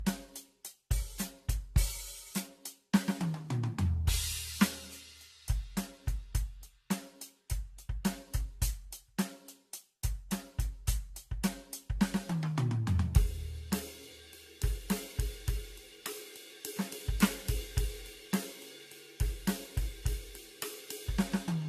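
Throughout the music, the sound is swirly, smeared and hollow, with softened attacks. This fits generation loss, likely from around seven rounds of lossy re-encoding consistent with AAC-LC near 64 kbit/s. A spectrogram shows nothing above 14 kHz.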